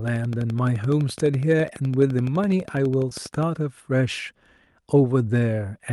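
From 0.08 to 3.44 s a train of clicks, about 12 per second and evenly spaced, ticks over the speech at roughly 5 dB above it, likely from electrical interference; it shows as thin vertical lines.

At 3.09 to 3.13 s, short concealed packet loss: about 20 ms went missing, and the receiver bridged 14 ms by extending the previous sound. It is heard as a brief smear, with a smoothed patch in the waveform.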